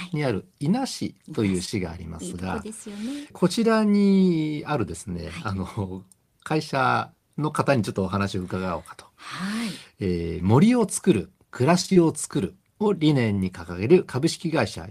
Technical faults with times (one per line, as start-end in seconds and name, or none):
1.65-1.73 short concealed packet loss
11.81-11.97 repeated packet loss (robotic sound)
13.33-13.39 short concealed packet loss